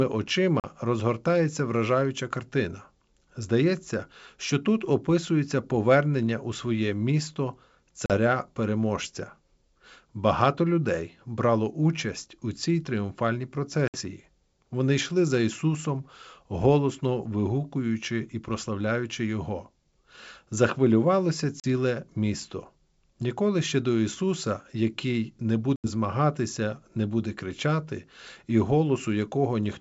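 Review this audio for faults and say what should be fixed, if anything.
Packet loss on an ADPCM call cuts into the speech five times: 0.60–0.65 s, 8.06–8.15 s, 13.88–13.98 s, 21.60–21.65 s and 25.76–25.87 s. Each hole lasts 40 to 80 ms, roughly two to four packets' worth. The receiver's adaptive predictor and step size drift from the sender's, so the sound resumes slightly distorted before settling. On a waveform each one is a flat, hard-edged gap. A spectrogram shows an empty vertical slot. The G.722 wideband coding around these holes, which fits its 64 kbit/s mode, stays clear up to 7 kHz.

Packet loss concealment that fills each gap and keeps the decoder's ADPCM state tracking the sender would prevent these breaks.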